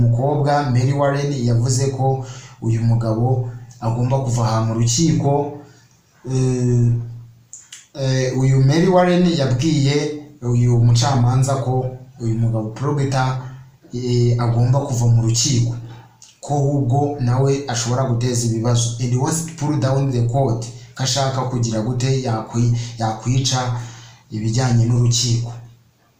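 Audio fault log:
Nothing to log here, as no technical faults turn up anywhere in this clip.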